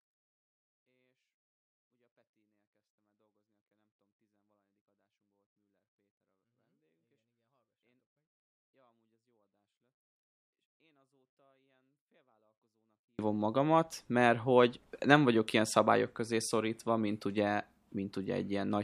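From the start until 13.19 s, the speech sits about 48 dB below where it should, clean but almost inaudible. This is a 24-bit alignment error, too quiet. The samples were stored as 24-bit values in the low bytes of a 32-bit word. They were then read as full 32-bit integers. That places every sample 256 times too low. Nothing is distorted. The level simply collapses. Normal loudness returns just before "magamat mert hogy nem".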